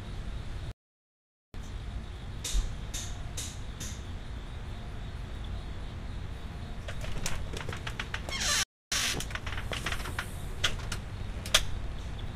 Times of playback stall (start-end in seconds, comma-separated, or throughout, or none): 0.71-1.54, 8.63-8.92